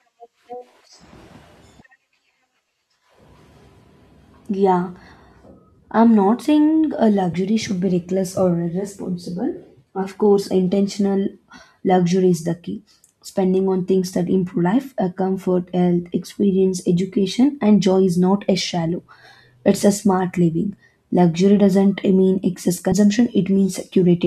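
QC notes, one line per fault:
7.32 s and 22.91 s, compressed frames skipped: between "I'm not saying a" and "should be reckless" roughly 20 ms vanishes, consistent with one lost frame. After "doesn't mean excess" about 70 ms drops, suggesting several consecutive frames. At each gap the audio jumps ahead by the length of the missing frames.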